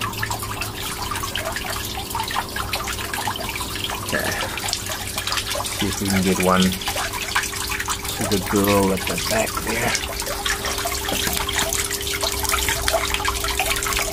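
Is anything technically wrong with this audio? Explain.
No, nothing stood out as technically wrong on listening.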